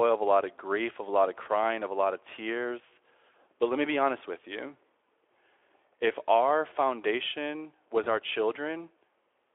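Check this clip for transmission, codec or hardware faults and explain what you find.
One fault type appears three times: VoIP packet loss concealed by the speech codec. It hits at 1.43–1.48 s, after "of a lot of"; at 3.32–3.34 s, after "a lot of tears"; and at 8.03–8.07 s, after "our foundation was". Each gap is about one 20 ms frame. The decoder fills it by repeating its last pitch and filter at falling gain. The speech briefly smears into a fading buzz or coloured noise, then recovers. The Speex coding itself sounds narrowband, band-limited to about 300–3400 Hz.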